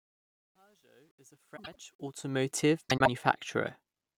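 From 0 to 2.51 s the speech fades in, and the quiet start carries truncation distortion on a fade. The fade stage kept too few bits, about what an 11-bit path would give, and added no dither, so the lowest levels collapse into coarse square steps. Up to 1.74 s it sounds gritty. It clears as the level rises. Steady hiss or clipping would not do that.

From 1.56 to 1.75 s, and again from 2.89 to 3.08 s, the frames are out of order. In each, two neighbouring blocks of about 78 ms, which fits three frames each, play with their halves swapped. The result is a garbled flutter. Unlike a dropout, nothing goes missing and the timing stays intact.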